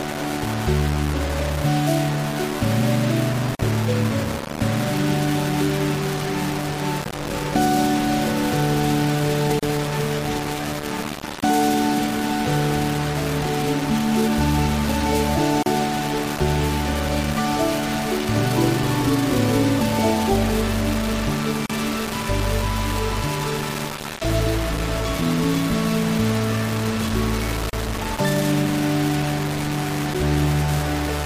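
Low bit depth without dither throughout: coarse, signal-following grain only about 10 dB under the audio, likely from rounding to roughly 3 bits. Gaps at joins of encoded pieces at 3.55, 9.59, 15.63, 21.66 and 27.70 s, spaced 6 s apart and lasting 41 ms at the first and 34 ms at the rest, come from separately encoded segments whose start delay and end padding were never trimmed.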